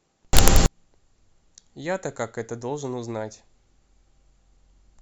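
From 0.33 to 0.66 s the speech gives way to loud, harsh broadband noise: samples built from the wrong bytes. The low, fast-changing bits become the high-order part of each value. The waveform turns dense and loud, and the spectrogram shows a flat wideband block across all frequencies.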